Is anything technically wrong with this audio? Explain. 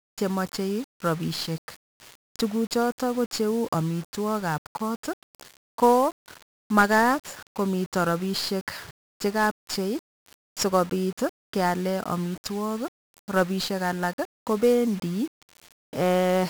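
Yes. 1-bit DFPWM compression runs through the whole clip. Each sample is reduced to a single bit that only nudges an adaptive level up or down, so the waveform is rebuilt as a coarse staircase chasing the original. The damage here is heavy, with a dense broadband noise floor that leaves the speech fuzzy and crackling throughout, and the upper frequencies are dulled or smothered in hiss. This fits a low-rate stream of around 48 kbps.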